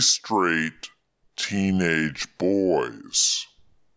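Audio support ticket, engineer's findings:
Wrong sample rate, whole clip. Speech low and dragging, about 0.73x speed, pitch down about 5.5 semitones. Playback clock or resampler likely at fault: the ratio fits audio captured near 22 kHz played back at 16 kHz without conversion. Differs from a time-stretch or pitch-shift error because tempo, pitch and formants all drop together by the same factor, with no phasing or smearing artefacts.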